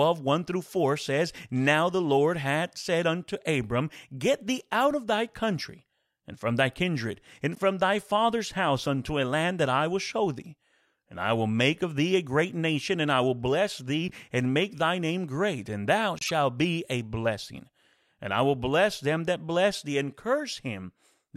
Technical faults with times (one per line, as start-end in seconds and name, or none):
7.55-7.59 corrupt frame decoded
14.08-14.13 corrupt frame decoded
16.19-16.31 corrupt frame decoded